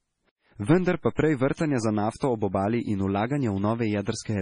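Speech, with heavy MP3 compression throughout: nothing is present above 10.5 kHz, and weak spectral detail flickers in and out, giving a watery, swirly texture that likely points to a low bitrate around 24 kbps. Pre-echo appears as a brief hiss ahead of sharp attacks, where quantisation noise spreads across the whole transform block into the quiet before the onset. It occurs at 1.03 s just before "pa prej", from 1.15 to 1.18 s, from 1.54 to 1.57 s just after "pa prej", and from 2.16 to 2.21 s before "ob obali in". Each of these attacks sounds softened.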